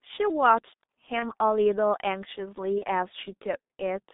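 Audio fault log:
Throughout: G.723.1 codec. The speech is muffled and hoarse, with everything held between roughly 200 Hz and 3.7 kHz and consonants smeared. That fits a very low bitrate around 6.3 kbit/s, where a slowly updated voice model with 30 ms frames can't track fast changes.
1.19–1.31 s and 2.78–2.85 s: VoIP packet loss concealed by the speech codec. Each gap fits a single lost 30 ms frame. The decoder stretches the last sound into a fading buzzy tone or coloured noise, and the speech stays weak or distorted for a short while afterwards as it recovers.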